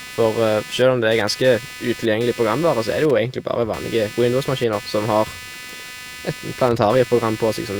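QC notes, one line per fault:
Throughout, computer activity noise: a buzzing, chirpy layer sits under the speech at roughly 15 dB below it, pulsing at around 300 Hz and rising and falling with the machine's workload rather than with the talker. Changing processor and graphics load pulls on the ground shared with the audio circuit. On a spectrogram it shows as bursts of harmonic stripes spaced about 300 Hz apart, present in pauses too. The waveform shows a raised, fluctuating floor between phrases.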